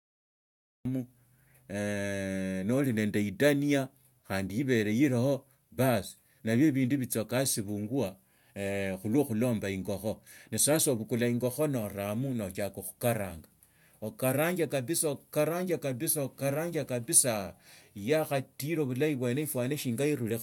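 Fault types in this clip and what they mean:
Cut-off start: digital silence until 0.85 s, then the speech jumps in abruptly mid-sound with no natural attack, because the recording began late.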